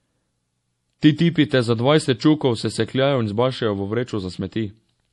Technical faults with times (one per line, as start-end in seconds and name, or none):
0.00-5.12 MP3 compression